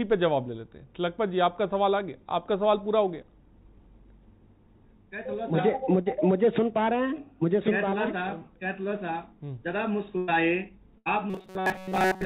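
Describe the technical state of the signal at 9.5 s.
At 9.5 s the audio is intact, with no fault present, just the narrowband sound of a call path that carries nothing above 4 kHz, consistent with G.711 mu-law coding.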